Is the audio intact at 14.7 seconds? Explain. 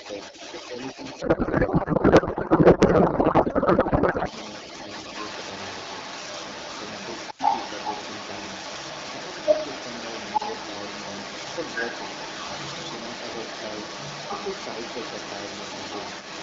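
No. At 14.7 s, as throughout the recording from 0.0 s, the other side's voice is leaking through: a second voice sits a little louder than the talker, likely far-end audio from the loudspeaker that the echo canceller failed to remove. A spectrogram shows two overlapping sets of harmonic bands.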